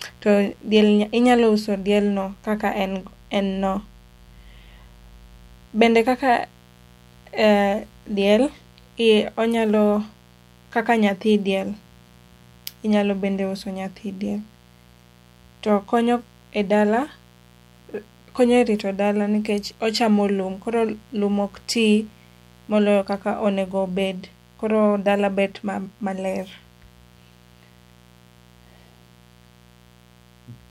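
From start to finish the speech sits on a steady, raspy mains buzz at around 30 dB below the signal. It's 60 Hz hum with spiky harmonics climbing into the kHz range, the kind a dimmer, rectifier or poor shielding lets leak in.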